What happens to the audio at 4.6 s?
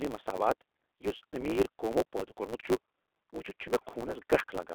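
At 4.6 s the sound is still under the two faults that run through the whole clip. One is the G.729 codec at 8 kbit/s. Each 10 ms frame is rebuilt from a vocal tract filter, a pitch predictor and a few pulses, so the speech sounds plainly rough and synthetic. The band is held to roughly 300 Hz to 3.6 kHz, with nothing above 4 kHz. A simple low-pass filter would only muffle the sound without this grainy, rebuilt texture, which is what identifies a codec.

The other is a block size mismatch (truncated). One stage writes blocks about 9% longer than the next stage reads, so the tail of every block is dropped. The cut recurs 109 times a second, giving a steady 109 Hz buzz, and the speech runs 1.09 times fast while its timbre stays. A resampling error would raise the pitch along with the speed. A padded mismatch would slow the speech down instead of hurrying it.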